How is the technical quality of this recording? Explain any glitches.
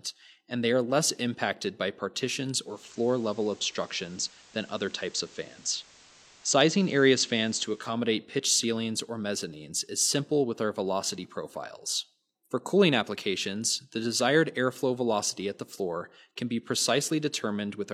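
Technical quality drops for one stretch because of digital radio blending to analogue. From 2.56 to 8.01 s the receiver lost its digital signal and cross-faded over about 377 ms to the station's FM broadcast, then back. Hiss rises to roughly 25 dB below the signal, with no level jump.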